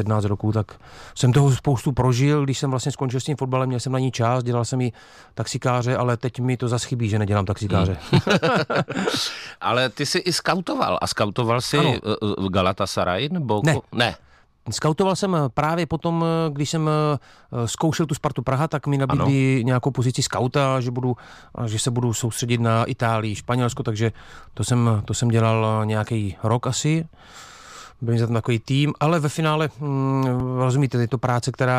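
At 30.40 s the speech has a repeated buffer: the playback device ran short of new audio and played its last block twice more. Each block lasts about 1.45 ms, which fits a 64-sample buffer, so the repeats come out as a brief click or buzz rather than an audible stutter. Unlike a dropout, the sound is not cut to silence, and essentially nothing is lost.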